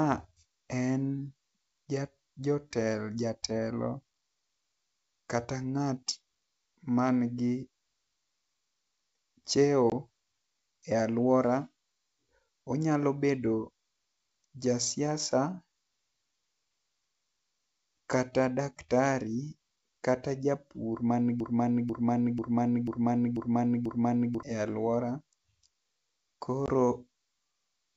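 At 9.90 s and again at 26.66 s there is packet loss on an ADPCM call. Each gap is a sharp 20 ms hole, about one lost packet. The decoder's predictor and step size drift from the sender's, so the speech returns slightly distorted before settling.

From 21.40 to 24.43 s a broken-record loop takes over. A 0.49 s fragment repeats six times, back to back and identical. The stream likely stalled and kept resending its last buffer, so the speech for that stretch is lost.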